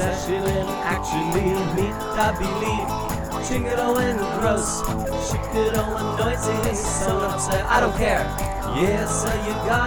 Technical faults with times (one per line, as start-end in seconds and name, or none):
none